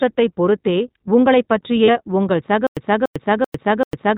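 Speech coded throughout with the iLBC codec, with plainly audible damage: a slightly rough, synthetic quality, and a spectrogram that stops dead at 4 kHz with empty space above. This fits iLBC's 20 ms frame mode at roughly 15 kbps. Just after "பொறுத்தே உங்களைப்", from 1.84 to 1.90 s, there are lost iLBC frames, about 40 ms or two frames' worth. The decoder fills the gap by repeating the last pitch cycle with added noise, which sounds like a brief buzzy, held vowel. On a spectrogram this appears as flat, evenly spaced harmonics with no movement. From 2.67 s to the end there is a stutter with silent gaps. A 288 ms fragment plays four times at a 388 ms period, with 100 ms of flat digital silence between repeats. On the waveform this shows as identical blocks separated by silent stretches. The likely cause is a stalled player or stream replaying its last buffer at each retry.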